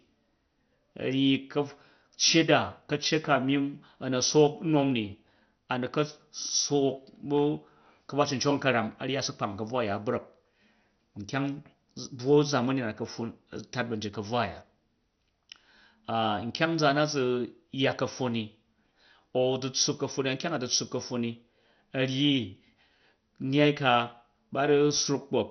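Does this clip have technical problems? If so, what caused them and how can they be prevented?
Yes. Throughout, the speech sounds dull and gurgling, with nothing above 6.1 kHz. This is likely heavy MP2 compression at a low rate near 48 kbps. Encode at a higher bitrate to prevent it.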